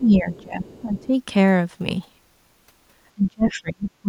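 From the start to 1.13 s the speech sinks and recovers in pieces, at its deepest roughly 20 dB down and for well over half a second in total. That is likely speech suppressed in double talk: with both sides talking, the echo canceller cannot tell the local talker from the loudspeaker echo and turns everything down. Unlike a network dropout, the level is turned down by the canceller rather than lost in transit.

That other voice is heard in two scraps, at 0.32 to 0.42 s and 0.66 to 1.06 s, about 30 dB below the speech. This is the other side's voice leaking through, likely because the canceller has not fully removed the loudspeaker signal from the microphone. A room reflection would be a delayed copy of the talker's own voice, but this is a different voice, and faint.

From 3.15 s to the end the suppression returns and cuts deeper, to roughly 30 dB down. A brief leak at 3.48 to 3.52 s is louder this time, at about 20 dB below the speech.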